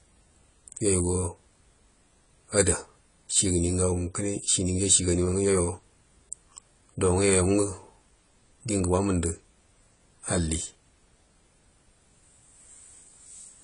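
From start to finish, the speech sounds dull and smeared. Nothing is heard above 10 kHz. Sustained sounds warble and sibilants turn fizzy. The damage is plainly audible. This is likely AAC compression, in its AAC-LC form. At a low rate the encoder lowers its cut-off and starves some frequency bands. Gaps or substitute noise take their place. The degree of damage fits a bitrate near 24 kbps.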